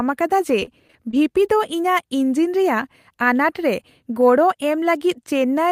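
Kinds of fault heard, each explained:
Repeated packet loss (robotic sound): Between 0.59 and 1.25 s the speech keeps breaking up in five short holes, the longest about 25 ms, where audio data went missing or arrived too late. Each hole is patched by stretching the preceding sound, which gives a choppy, mechanical, robotic texture rather than clean silence. About 92 ms is filled this way, roughly 17 percent of that stretch, and about 80 ms of the original sound is lost.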